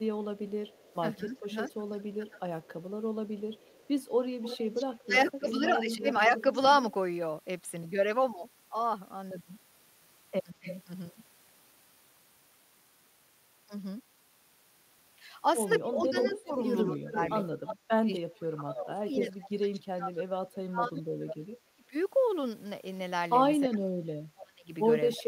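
Echo leak from 0.69 to 6.62 s: a copy of the speech returns 172 ms late at about 10 dB below it, likely because a far-end loudspeaker echo slipped past the echo canceller. Overlapping it, speech suppressed in double talk at 1.16–2.44 s and 5.06–6.06 s pulls the talker down by up to about 15 dB, likely the canceller turning down its own talker along with the echo while they overlap. At 10.51–10.66 s a brief dip of about 20 dB, likely the same double-talk suppression, runs straight into another echo leak at 10.63–10.81 s, a short 268 ms repeat about 10 dB down, likely leaked loudspeaker pickup. From 15.79 to 18.83 s the echo leak returns 325 ms late at roughly the same loudness as the speech, likely uncancelled loudspeaker sound. Meanwhile, speech suppressed in double talk from 15.8 to 21.95 s pulls the talker down, up to about 30 dB deep, for roughly five seconds in total, likely the canceller clamping down during overlap. 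It recurs from 23.68 s to the end with drops of about 30 dB, likely for the same reason.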